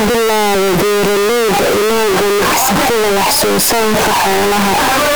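Speech, about 5 s long, and the whole thing has the float read as integer problem: the audio was likely stored as 32-bit float and then decoded as 32-bit integer. With that mix-up, the sign and exponent bits end up driving the sample values, so the waveform is slammed into a near-square shape at an almost fixed, high level no matter how quiet the original was. It comes out very loud and harsh, with the background noise as loud as the speech.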